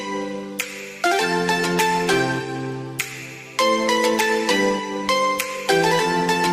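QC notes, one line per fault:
No faults detected.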